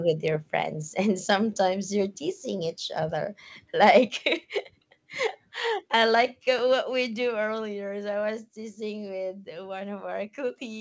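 At 6.59 s there's a repeated buffer: a tiny slice of speech plays twice, which fits a 5 ms buffer, so it comes across as a quick click.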